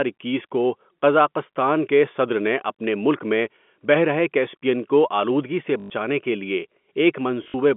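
Packet loss with the last packet repeated hits at 5.8–5.9 s, between "کیسپیئن کو آلودگی سے" and "کے لیے", and at 7.44–7.54 s. Replayed packets buzz around 50 Hz, which fits 20 ms packets. The later loss comes in broken runs up to 60 ms.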